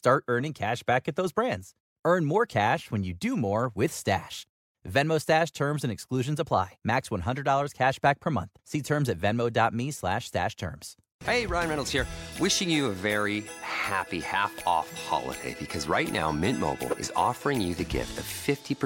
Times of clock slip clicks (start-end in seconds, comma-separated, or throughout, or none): 0.11-18.85